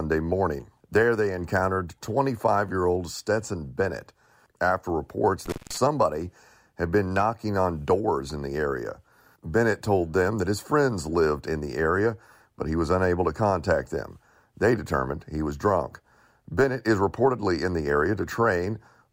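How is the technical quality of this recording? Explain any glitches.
The recording has one glitch, an intermittent contact in the speech just after "after reports", between 5.46 and 5.77 s. The sound drops out for about 0.18 s, with crackle at either edge and faint hiss in the gap. A loose cable or plug briefly lost its connection, then reconnected.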